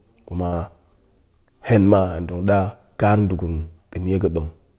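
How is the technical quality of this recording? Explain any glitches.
The recording has one glitch, a burst of packet loss, heard through a narrowband call path whose sound stops at 4 kHz, which fits G.711 at 64 kbps.

From 0.46 to 0.54 s, consecutive packets went missing. The receiver extended the last sound for 60 ms, fading it down, then resumed 60 ms further on, so speech skips ahead. Unlike a clean dropout, the gap is filled rather than silent.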